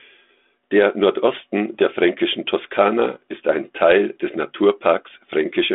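Nothing stood out as a technical fault on listening to this recording.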